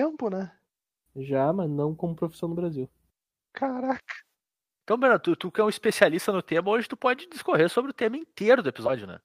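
Speech recording, with no audible technical faults anywhere.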